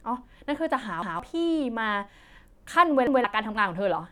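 At 1.02 to 1.20 s and again at 3.07 to 3.24 s, the speech stutters: a repeated buffer. Fresh audio failed to reach the output in time, so the last block, about 0.17 s long, was played a second time. Each repeat has a hard join where the duplicate begins, and roughly 150 ms of the original speech is missing after it. The identical block length and spacing fit an 8192-sample buffer.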